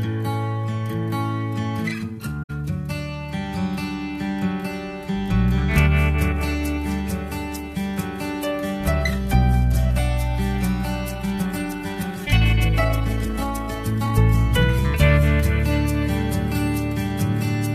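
At 2.42 s to 2.50 s there is a corrupt frame concealed by the decoder. Damaged bits in the compressed stream were detected, and rather than playing garbage the decoder substituted its own fill for the affected span. The roughly 80 ms length fits about three AAC frames. The timing on either side stays intact.

From 11.12 s to 14.28 s the pace jumps to about 1.44 times normal while the pitch stays where it was, which points to a time-stretched section, likely software squeezing the audio to fit a target length. To hold pitch, the process discards short slices of the waveform and joins the remainder, so this stretch sounds rushed.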